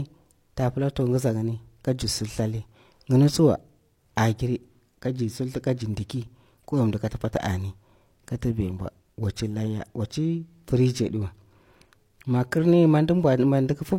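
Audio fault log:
Throughout: low-bitrate audio saved at a high bitrate. The speech has nothing above 16.3 kHz, inside what looks like a roomy 192 kbit/s MP3. That's likely an earlier low-bitrate encode, maybe 32 kbit/s HE-AAC, re-saved larger, which can't restore what got stripped.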